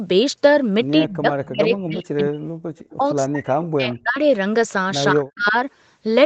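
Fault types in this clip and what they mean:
Speech suppressed in double talk: The talker's level keeps getting pulled down in chunks, at 1.07 to 1.27 s, 1.46 to 2.56 s, 2.97 to 4.18 s and 5.12 to 5.56 s. The first dip is shallow, around 25 dB, and the later ones sink by about 40 dB, nearly cutting out. That's likely an echo canceller that heard both ends talking at once and couldn't tell the local voice from loudspeaker echo, so it ducked everything.
Echo leak: There's a brief ghost of the voice at about 2.9 s, lasting only around 60 ms and sitting roughly 25 dB under the main speech. It trails the original by about 172 ms, so it comes across as a faint, delayed scrap. It's likely leftover loudspeaker pickup that the echo canceller didn't fully scrub out, which then got sent back down the line.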